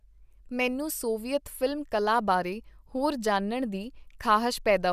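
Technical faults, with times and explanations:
Nothing stood out on listening to this speech recording.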